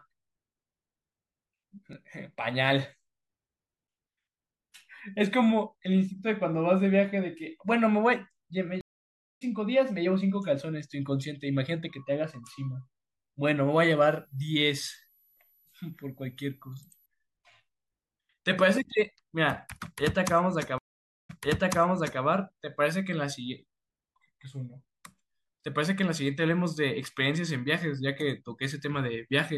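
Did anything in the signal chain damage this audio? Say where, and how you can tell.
Yes. There are two stream reconnects, a network-stage fault. At 8.81 s the audio drops out for 0.6 s and returns roughly 0.4 s further on. At 20.78 s a 0.51 s gap is followed by a 0.94 s repeat. Each break restarts the decoder mid-stream.

A switching supply whistle sits in the analogue wiring from 14.09 to 17.06 s. It is a faint high tone, about 40 dB below the speech, drifting between 11.7 and 11.9 kHz. The drift tracks the supply's changing load.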